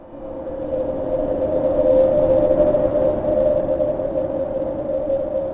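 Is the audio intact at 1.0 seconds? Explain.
Yes, the audio is intact at 1.0 seconds, with nothing interrupting or damaging it there beyond the band limit of the call path, which carries nothing above 4 kHz.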